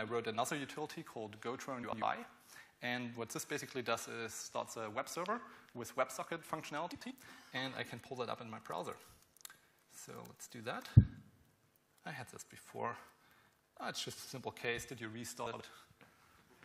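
The audio has four short spots where frames play out of order, at 1.83 to 2.02 s, 6.92 to 7.11 s, 14.18 to 14.29 s and 15.46 to 15.61 s. In each, two adjacent blocks swap places, about 93 ms each in the first two, 46 ms in the third and 70 ms in the fourth. The result is a brief garbled flutter. The timing fits swapped runs of a few frames each. Nothing goes missing.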